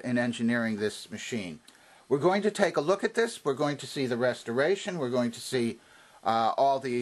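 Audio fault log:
No faults heard.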